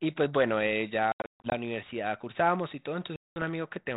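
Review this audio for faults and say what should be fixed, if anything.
There's packet loss on an ADPCM call in two places. From 1.12 to 1.53 s, about 280 ms goes missing, scattered across roughly 400 ms in gaps up to 140 ms long, so around fifteen packets. A second hole runs from 3.16 to 3.43 s, about 200 ms or roughly ten packets. Each gap drops to abrupt silence. Because the decoder's predictor and step size lose track of the sender's, the speech comes back slightly distorted, then settles. The light, band-limited telephone sound points to 32 kbit/s G.726. A jitter buffer with packet-loss concealment and decoder state resync would fix it.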